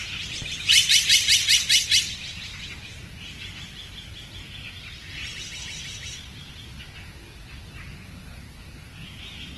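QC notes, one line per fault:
Throughout, Opus compression: the audio sounds grainy, rough and noisy, with nothing above 12.2 kHz. This is likely Opus's music mode at a rate near 16 kbps, refilling starved bands with folded or noise energy. The spectrogram shows a hard ceiling and speckled, nearly hole-free bands.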